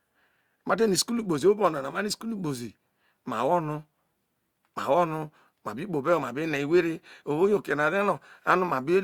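No technical faults can be heard anywhere in the recording.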